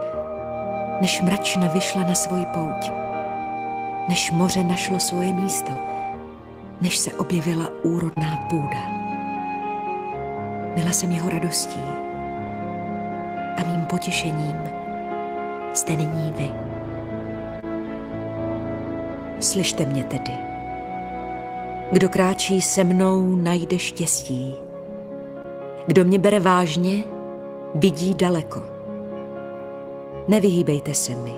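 Short concealed packet loss occurs seven times, at 3.43, 5.02, 5.73, 8.13, 13.73, 17.60 and 25.42 s. Each time about 20 ms of audio failed to arrive, which fits a single lost packet. The receiver bridged the gap by extrapolating the preceding sound for roughly 12 to 28 ms before crossfading back. Each event is heard as a brief smear or wobble. At 8.13 s the repair also drops a short slice of about 13 ms.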